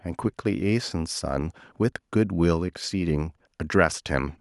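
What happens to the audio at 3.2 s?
Nothing goes wrong at 3.2 s; the speech continues intact through that moment with no dropout, click or distortion.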